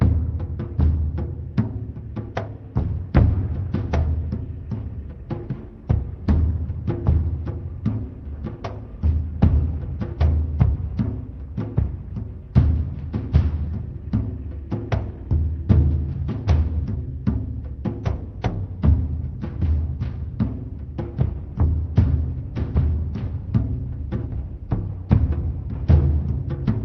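No technical faults can be heard; the audio comes through a call path whose codec limits the top end to about 6 kHz, which fits an Opus connection at a modest bitrate.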